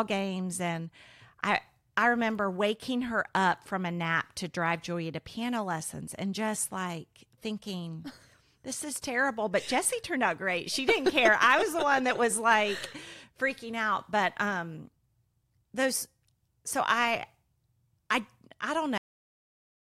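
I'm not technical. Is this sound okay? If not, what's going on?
No. This clip has a cut-off end: the recording stopped before the last stretch of audio was saved, so the speech halts mid-sound at 18.98 s, right after "I I", dropping straight into dead silence with no natural fade.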